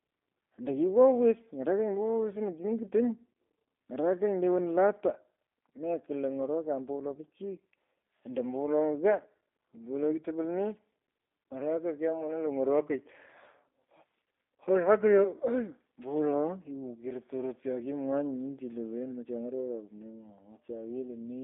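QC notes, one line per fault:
throughout G.729 codec: the speech sits in a 250 Hz to 3.6 kHz line band with nothing above 3.8 kHz, and has a plainly audible rough, synthetic texture from pulse-based rebuilding, which fits an 8 kbit/s G.729A stream; band-limiting alone would sound dull but clean.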